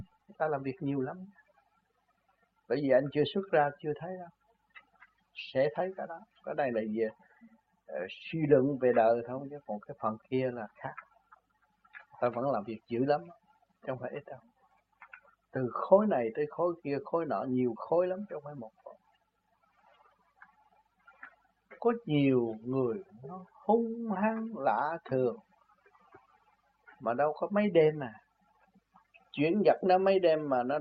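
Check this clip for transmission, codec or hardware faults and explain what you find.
No transmission, codec or hardware faults can be heard; the audio signal holds steady throughout, with no interruptions, level disturbances or other technical defects.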